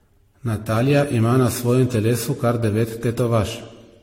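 Generation loss runs through the whole of this speech clip, most likely from repeated lossy encoding. The sound is swirly, smeared and hollow, with blurred consonant attacks and nothing above 16.6 kHz. Each decode and re-encode quantises the audio again on a shifted frame grid, so noise and spectral holes accumulate with every pass. The damage fits around five passes through an AAC-type codec at a modest rate of about 64 kbit/s.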